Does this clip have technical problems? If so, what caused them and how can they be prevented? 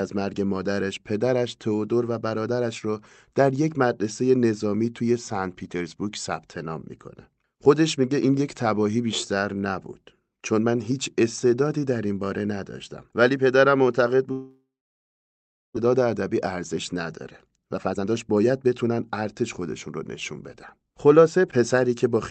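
Yes. From 14.31 to 15.78 s the sound breaks off. The last sound is stretched into a fading buzz, followed by about 1.08 s of silence, and roughly a second of audio never returns. The likely cause is a long network dropout. On a spectrogram, smeared bands fade into a blank gap. A more stable connection with forward error correction helps prevent it.

A jitter buffer speed-up follows as the receiver drains the delay that built up during the gap. From 15.86 to 16.93 s the audio runs at 105% speed and loses about 70 ms. From 17.44 to 19.43 s it runs at 118% and loses roughly 0.4 s, with the pitch unchanged. The waveform shows whole pitch periods spliced out, so the syllables look squeezed in time. Capping how fast the buffer catches up keeps the hurrying less noticeable.

Throughout, the call path's upper band limit sits at 8 kHz, consistent with a 32 kbps Opus stream.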